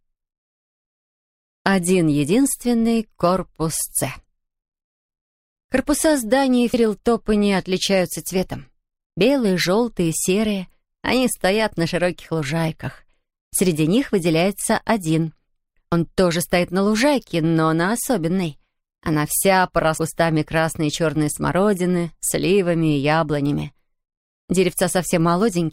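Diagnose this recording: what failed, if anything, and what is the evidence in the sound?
Damaged data in the compressed stream, at the codec stage, made the decoder lose sync, producing brief 30 ms glitches at 6.74, 15.92 and 19.98 s.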